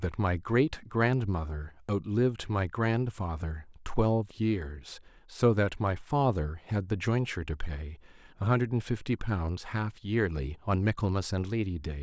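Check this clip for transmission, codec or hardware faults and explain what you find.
No transmission, codec or hardware fault can be heard anywhere in the speech; the signal stays continuous and intact throughout.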